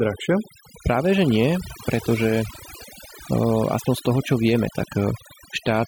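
From start to finish, the speech carries overdone noise removal. A noise reduction stage was pushed too hard on a noisy recording. It cuts individual frequency bands deep, or removes them outright, whenever they sit close to its noise estimate. Quieter parts of the voice fall under that threshold and vanish with the noise. The background drops, dotted with twinkling specks.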